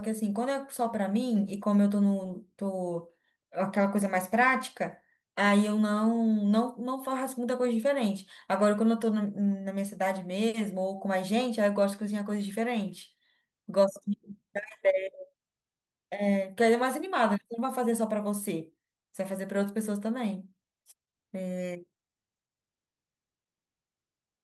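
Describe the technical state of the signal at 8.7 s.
At 8.7 s the speech signal is intact, with no fault audible at that moment.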